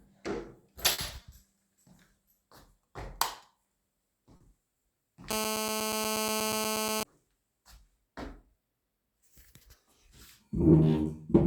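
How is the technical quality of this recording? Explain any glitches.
The recording has two kinds of fault: three brief stalls and a stretch of phone buzz.

Short stalls from a late packet occur at 0.92, 1.22 and 4.36 s. Each time the jitter buffer ran dry, so the last sound was held for 60, 20 and 40 ms. Nothing is lost, but playback hesitates.

GSM phone buzz runs from 5.31 to 7.03 s. A nearby phone on a call pulses 217 times a second. The audio circuit rectifies this into a steady, raspy buzz, about 4 dB below the sound.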